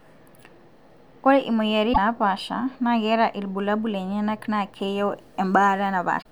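A short glitch interrupts the speech at 1.90 to 1.98 s and again at 6.18 to 6.26 s: damaged data in a compressed stream, where corrupted frames threw the decoder out of sync.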